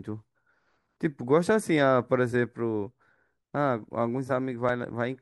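At 4.69 s the speech jumps forward, skipping roughly 10 ms of sound without any gap of silence. This is most likely a dropped buffer (overrun): the recording software fell behind, the hardware overwrote a block of samples before they were collected, and the audio on either side was spliced directly together. On a waveform the trace shows a sudden discontinuity with no flat section, and a spectrogram shows a thin vertical broadband line at that instant.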